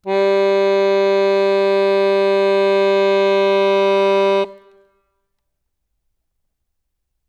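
Listening to this music, nothing stood out as a technical fault at any point.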